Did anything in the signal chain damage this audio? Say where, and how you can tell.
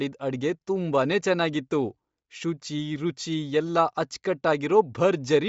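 Yes. The damage sits at the codec stage, and it runs through the whole speech clip. The band stops dead at about 7.7 kHz, and the upper range that survives has a breathy, grainy texture. That pattern most likely comes from Bluetooth LC3 compression. At a rate near 32 kbps on 10 ms frames, this transform codec discards most upper-spectrum detail and fills the gaps with shaped noise. The artefacts are plainly audible.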